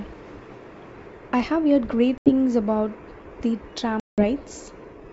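Packet loss on an ADPCM call cuts hard-edged silent holes at 2.18 to 2.30 s (80 ms lost) and 4.00 to 4.24 s (180 ms, about ten packets). Unlike a plain dropout, the 64 kbit/s G.722 decoder's predictor loses track, so sound resumes slightly distorted, settling within tens of milliseconds.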